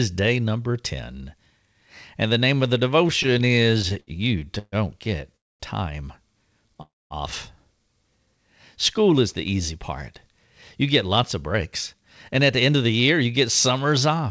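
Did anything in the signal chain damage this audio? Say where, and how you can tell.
Yes, the damage is at the network and jitter-buffer stage of a call path, whose band stops at 8 kHz, which fits a G.722 wideband codec.

Repeated stalls (stutter) run from 3.23 to 5.36 s: twenty short hold-ups, the longest 136 ms, together about 395 ms or 19% of that span. Packets arrived too slowly, the buffer kept emptying, and the receiver stretched the last sound each time, so the audio drags and stutters.

A call audio freeze follows at 5.36 to 5.63 s, and another at 6.82 to 7.13 s. Each is a brief continuation of the last sound that drops to silence, about 234 ms and 288 ms in all, with about 230 ms and 220 ms of silence. The likely cause is packets held up in transit, emptying the buffer. Playback then resumes from the stop point.

A jitter buffer speed-up runs from 9.51 to 14.26 s. The audio plays about 5% fast at unchanged pitch and sounds hurried. 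The buffer had built up excess delay, and the receiver trimmed pitch-period-length slices repeatedly, roughly 0.3 s in total.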